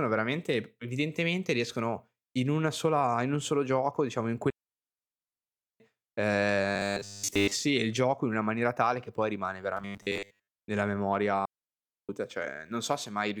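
At 4.50 s the speech falls into a digital wireless dropout. The receiver loses too much data and mutes with a very short fade for 1.3 s, until 5.80 s, with no noise burst on either side. The waveform goes flat, and the spectrogram shows a clean blank across all frequencies.

From 6.70 to 7.53 s, and again from 9.77 to 10.48 s, the speech becomes a rigid, metallic 100 Hz buzz. This robotic sound is likely caused by repeating a 10 ms buffer, which replaces most of the real audio. The spectrogram shows evenly spaced harmonic lines 100 Hz apart, and the waveform repeats identical short cycles.

A second dropout from 11.45 to 12.09 s leaves 0.64 s of near silence, another clean gap in both views.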